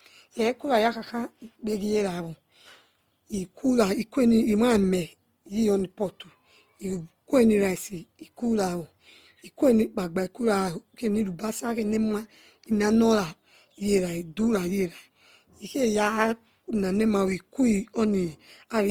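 Throughout the speech, voiced sounds turn rough and grainy, with a noisy texture filling the upper bands instead of leaving gaps, though content still reaches 20.3 kHz. The cause is likely Opus compression in its CELT music mode, short of bits, which fits a rate near 24 kbps.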